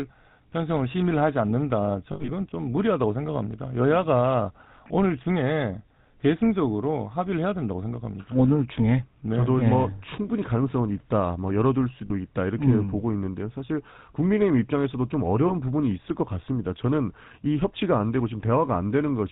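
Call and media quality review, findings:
GSM full-rate codec, whole clip. Buzzy, gravelly roughness on all speech. Nothing above 4 kHz. Damage plainly audible. Sound fits 13 kbps GSM full rate. Mechanism: vocal-tract model driven by regular pulses, excitation kept at one sample in three. Harsh, band-limited result.

Lost GSM frames, 2.12 to 2.31 s. Rough metallic ring, held then broken up. About 120 ms missing, scattered over 160 ms. Longest gap under a tenth of a second. Fits roughly six 20 ms frames. Decoder repeats the last good frame.

Lost GSM frames, 12.06 and 15.48 s. Brief metallic smear, 40 ms then 20 ms. Fits two frames, then one. Same last-good-frame repeat. Too short to fade to silence.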